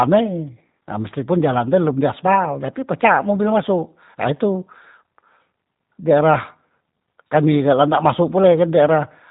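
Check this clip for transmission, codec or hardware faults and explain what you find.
The speech has passed through the G.729 codec, audible for the whole clip. Its low-bitrate model rebuilds speech from a vocal tract filter and sparse pulses, which fits about 8 kbit/s. Nothing passes above 3.8 kHz, leaving the speech plainly rough, muffled and synthetic.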